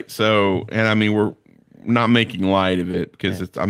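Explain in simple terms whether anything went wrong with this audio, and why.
Around 2.91 to 2.95 seconds there is a tiny blur in the speech, a quick smear or wobble lasting only a few hundredths of a second. This is short concealed packet loss. About 20 ms of the call's audio arrived too late or not at all, so the receiving end covered the gap by stretching out the sound that came just before it, then blended smoothly back into the real speech.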